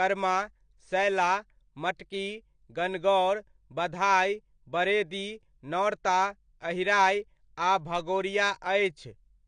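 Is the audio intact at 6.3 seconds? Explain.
No, the AAC compression runs through the whole clip, 6.3 s included. The encoder likely ran at a low bitrate, around 32 kbps, discarding everything above 9.8 kHz and coarsely quantising what remains, so the speech sounds dull and smeared, with plainly audible fizzy, warbling sibilants.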